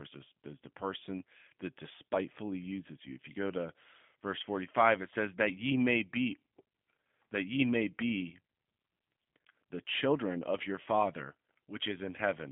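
Throughout, G.729 codec damage is plainly audible. Nothing passes above 3.6 kHz. The speech sounds rough and synthetic, as expected from an 8 kbit/s model-based rebuild.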